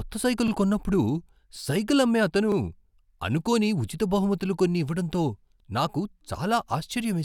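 At 0.48 s, and again at 2.52 s just after "సైకిల్ అమ్మే అతను", there's a repeated buffer: fresh audio arrived late, so the device replayed its last block once, giving a quick stutter with hard joins, consistent with a 40 ms buffer, and no speech lost.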